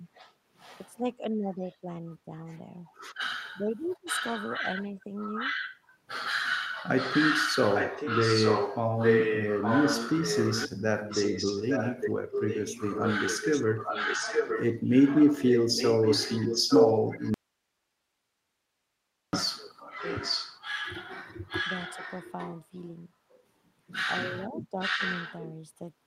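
From 0.0 to 2.31 s the speech dips by up to about 15 dB in patches totalling around 0.7 s. This is speech suppressed in double talk, likely caused by the echo canceller hearing both sides at once and turning everything down. In the same stretch, a faint echo leak appears at 0.14 to 0.34 s (about 25 dB below the speech) and at 1.66 to 1.76 s (about 35 dB down). It is a copy of the voice delayed by 859 ms, probably from a far-end loudspeaker whose canceller did not fully remove it.

From 3.45 to 5.79 s the echo becomes strong, only about 5 dB below the direct speech. Inside that span, from 3.59 to 4.07 s, the speech is again suppressed, by up to about 20 dB over roughly half a second.

From 6.97 to 22.64 s the 859 ms echo runs at about 5 dB below the speech.

Within it, from 17.34 to 19.33 s, the audio drops out for just under 2 s. The cut is abrupt and leaves only hiss around 55 dB below the signal level. 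This is an audio dropout to a faint residue, likely a loss of the signal upstream while the rest of the path stayed live.

From 24.39 to 25.03 s the speech dips again, by up to about 10 dB over roughly 150 ms. The echo returns from 24.8 to 25.48 s at about 5 dB down.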